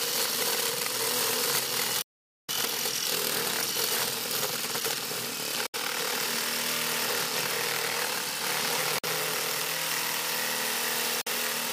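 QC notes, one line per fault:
2.02–2.51 s, 5.66–5.76 s, 8.98–9.05 s, 11.21–11.27 s: likely Bluetooth dropout; late packets were discarded, leaving silences of 0.46 s, 70 ms, 46 ms and 46 ms. Unlike a stall, the audio resumes further along, as if it had played on.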